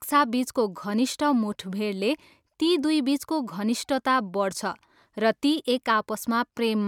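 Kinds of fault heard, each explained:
No faults can be heard in this speech recording.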